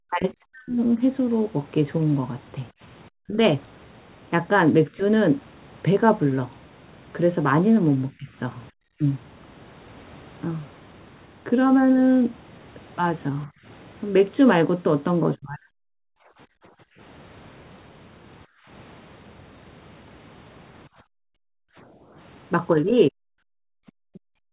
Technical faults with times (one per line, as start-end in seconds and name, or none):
0.05-5.01 speech suppressed in double talk
8.10-15.77 speech suppressed in double talk
16.05-23.59 background gated by the echo canceller
22.73-24.53 speech suppressed in double talk